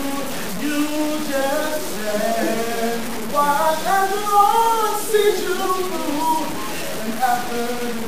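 Grainy distortion runs throughout and tracks the signal. The likely cause is low bit depth without dither, about four bits truncated, leaving noise roughly 10 dB below.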